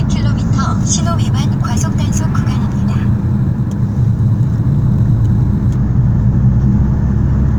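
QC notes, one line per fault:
1.04–5.76 s, crude rate conversion: there's a gritty, inharmonic fizz riding on the sound here, strongest on the loud and bright parts. It sounds like a nearest-sample conversion that repeats samples to stretch the stream. The repeats land in a fixed cycle, which fits a 44.1 kHz to 48 kHz conversion, so the error forms tones unrelated to the material. It sits roughly 35 dB under the signal.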